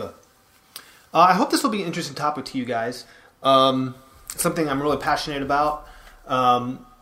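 From 1.59 to 3.26 s, channel delay causes comb filtering. One channel trails the other by roughly a single sample, so the mono sum cancels near the top of the band, around 20 kHz. The sound dulls slightly, and a spectrogram shows a darkened band at the very top.

Overlap between stream segments produces tiny skips at 3.04 s and 5.03 s, spaced at the 2-second segment length. Each time, about 5 and 11 milliseconds respectively are trimmed away, and the waveform shows a sudden step discontinuity.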